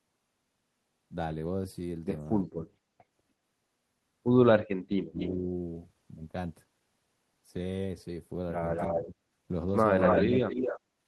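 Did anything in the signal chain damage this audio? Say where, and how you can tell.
Yes, the damage is in call processing. Around 5.06–5.18 s, 9.05–9.16 s and 10.25–10.47 s the speech dips hard, by about 35 dB at its worst. That's speech suppressed in double talk: the echo canceller likely couldn't separate the two talkers and ducked everything.

There's also echo leak from the same stage, a copy of the speech trailing by 236 ms at 5.19–5.3 s, 8.75–9.1 s, 10.02–10.23 s and 10.49–10.8 s. It ranges from faint to about as loud as the speech, likely loudspeaker pickup that the far end's canceller didn't fully remove.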